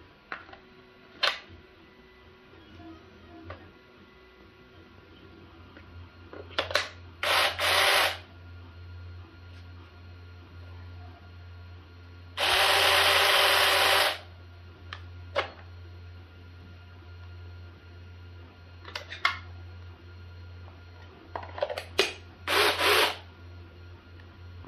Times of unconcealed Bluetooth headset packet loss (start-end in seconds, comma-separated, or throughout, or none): none